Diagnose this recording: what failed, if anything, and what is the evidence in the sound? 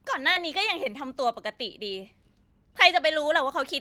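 A brief smear in the speech from 0.33 to 0.37 s, where about 20 ms of sound is replaced by a continuation of what came before, then blends back. This is short concealed packet loss: a network packet arrived too late and the decoder synthesised a stand-in.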